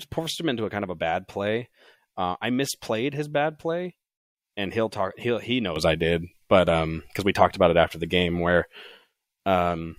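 At 5.76 s the speech and the background noise both step up by about 8 dB, and the higher level holds to the end of the clip. This is a sudden gain jump: the level changes from one sample to the next instead of rising over a fade. Because the noise floor rises by the same amount, the cause is likely a digital gain change, such as a new setting or bit shift, applied without a ramp.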